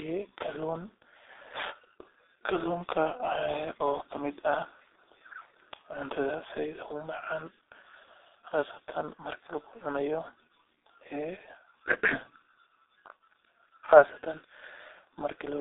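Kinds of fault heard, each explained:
G.723.1 codec: the whole clip sounds heavily squashed through a very low-rate phone codec, likely around 6 kbit/s, band-limited near 300 Hz to 3.7 kHz, muffled and hoarse, with smeared consonants.
VoIP packet loss concealed by the speech codec: around 8.48 to 8.52 s, roughly 30 ms goes missing, fitting one lost frame, and the decoder papers over it with a brief, fading smear.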